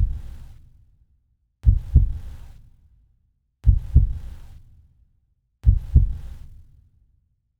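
No technical faults can be heard in this audio. There is nothing here that calls for a timestamp or an explanation.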